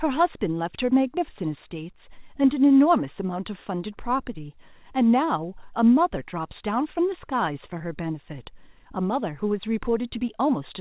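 At about 7.78 to 7.82 s there's a short concealed packet loss: roughly 20 ms of audio arrived too late, so the receiver extended the preceding sound to bridge the gap and blended back in. You hear a quick smear or wobble. The call-path band-limiting, with nothing above 4 kHz, fits a 64 kbps G.711-style codec.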